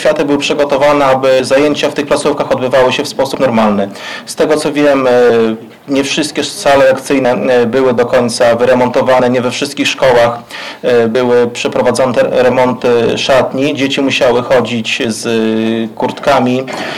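From the start and for the whole length, the audio shows hard clipping. The signal drives about 14 dB beyond what the stage can pass, so the peaks are sheared flat, with roughly a tenth of all samples sitting at the limit. Those squared-off tops add harmonics high up the spectrum, and with overload this heavy the result is a harsh, continuous fuzz riding on every loud passage rather than occasional crackle.

Short skips land at 1.40 s, 3.35 s, 7.25 s and 11.15 s. Each one loses about 50 ms, and the two sides are butted together with no silence. The spacing, just under 2 s for the first pair and then close to 4 s, fits a 2-second chunk size, and this is likely audio missing between chunks, dropped while one block is closed and the next opened.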